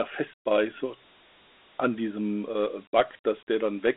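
Throughout the speech there is Dialogic VOX ADPCM damage. Each sample is coded as a coarse 4-bit step, consistent with 32 kbps at 8 kHz sampling. The band sits between 250 Hz and 3.4 kHz, nothing above 3.8 kHz, and a plainly audible gritty hiss tracks the speech.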